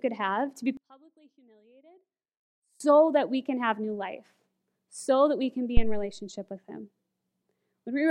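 A speech recording in which, from 0.77 to 2.80 s, right after "have to be", the sound collapses by about 31 dB and stays nearly gone until "that we can have". That deep cancellation is likely one channel inverted, with the reversed-polarity side cancelling the shared signal when the stereo pair is summed to mono. At 5.77 s, following "that we can be", a deep low thump breaks in and dies away with a decay of about 79 ms, gone by 6.12 s before "with him". This is a phantom power thump: a supply switched on or off on a live input sends a sudden step through the coupling capacitors.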